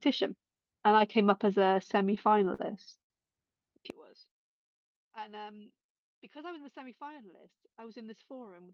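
A speech recording with three distinct faults. From 1.83 to 3.12 s there are repeated stalls (stutter): 13 brief hold-ups, the longest 89 ms, where the last sound is stretched while the jitter buffer runs dry. Together they fill about a fifth of that stretch. Nothing is skipped, which separates this from packet loss. The sound simply drags and catches. From 3.90 s to the end, the level falls by about 23 dB and what remains is a faint copy, the centred voice largely cancelled. The likely cause is one channel inverted, so the shared content cancels when the channels are summed to mono. This differs from a simple gain drop, which would keep the tone intact. Between 6.39 and 7.25 s there is a jitter buffer speed-up. Delivery runs at about 107% while the pitch stays put, because short pitch-period slices totalling about 70 ms are cut to shrink a backlog of delay. That unchanged pitch sets it apart from a resampling error, which would shift pitch along with speed.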